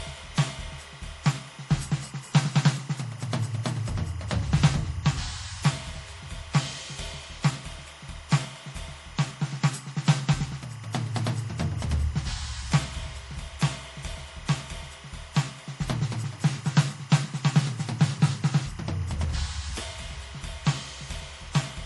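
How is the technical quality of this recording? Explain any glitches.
The quality is compromised by two faults that run through the whole music clip: a chirping interference tone and a dull, band-limited top end.

Timecode bleed is audible from start to finish as a steady, warbling chirp sitting roughly 25 dB below the music. It flips between pitches around 1 and 2 kHz. Linear timecode running at 25 frames per second has leaked in from a neighbouring track or cable, and its square-wave signal rides beneath the mix.

Throughout the clip, nothing is heard above about 11.4 kHz, so the top end sounds muffled, with the smeary artefacts of heavy compression. The likely cause is low-bitrate audio saved at a high bitrate. The sound fits an MP3 at around 48 kbit/s that was re-encoded at about 256 kbit/s. The first encode discarded that detail, and the larger second file cannot bring it back.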